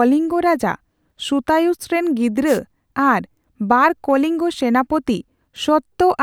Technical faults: wireless microphone noise hit

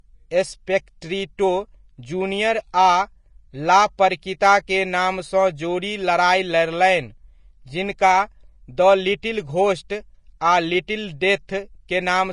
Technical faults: Vorbis compression

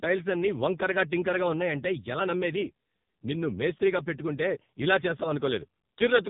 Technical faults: AMR narrowband mobile codec

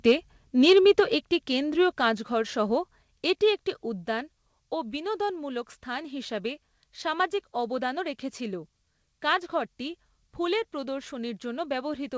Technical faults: microphone overload

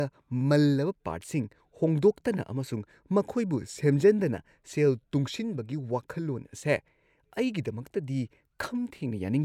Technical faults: none

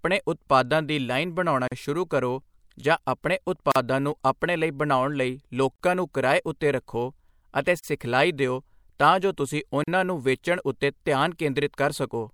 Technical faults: gap at a join of encoded pieces

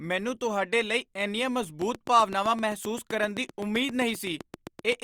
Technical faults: train of clicks

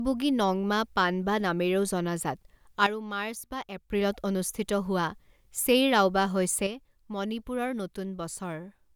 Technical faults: sudden gain jump

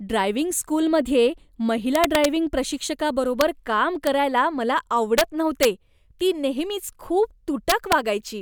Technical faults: integer overflow

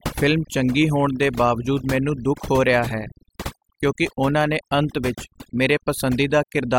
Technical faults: overdone noise removal

